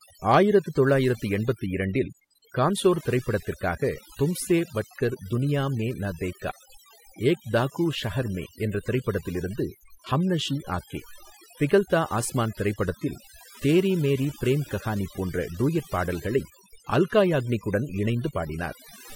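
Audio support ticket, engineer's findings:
Overdone noise removal throughout the speech, whole clip. Background dropped and broken up into twinkling specks. Denoiser set too hard, cutting bands near its noise estimate and taking quiet voice detail down with them.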